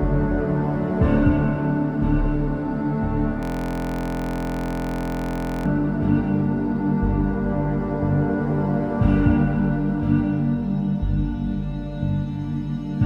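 From 3.43 s to 5.66 s the sound freezes into a steady, rough buzz at about 43 Hz. This is a system hang loop: a 23.22 ms slice, which fits a 1024-sample buffer, replays about a hundred times while the computer stalls.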